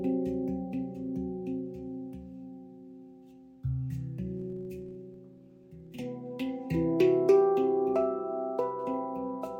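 From 4.37 to 6.08 s, a 46.9 Hz buzz of regular ticks rides on the sound. It is a filter restarted on every block, losing its state. The rate fits a 1024-sample block.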